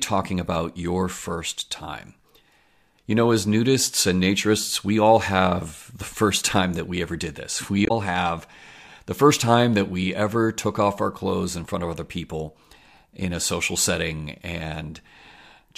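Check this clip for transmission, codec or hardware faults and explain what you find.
There's one fault in this speech clip. At 7.83 to 7.91 s, just after "we ever did this" and before "have the first time", damaged data in the compressed stream makes the decoder lose sync and hunt for the next frame header, leaving a short blip.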